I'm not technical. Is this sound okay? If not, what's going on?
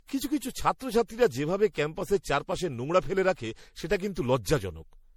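No, not quite. The whole clip has generation loss: the speech sounds swirly, hollow and a bit smeared, and the starts of sounds come out blurred. It was likely saved as an MP3 and re-saved about five times, with each pass adding fresh damage.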